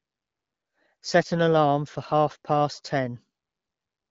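No technical faults can be heard in this recording.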